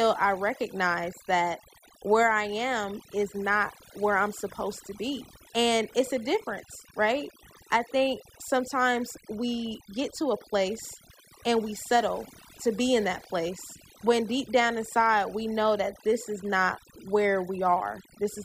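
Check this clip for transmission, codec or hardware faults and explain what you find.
The clip has one fault, and it is a processing fault rather than a transmission or hardware one: overdone noise removal, present for the whole of the speech. A noise reduction stage set far too hard pulls individual frequency bands down whenever they sit close to its noise estimate, taking the softer parts of the voice with them. Between phrases the background falls to near silence dotted with twinkling specks. A noise gate would instead cut the whole signal at once, leaving plain silence in the gaps. Here the damage sits in separate bands and continues through the voice.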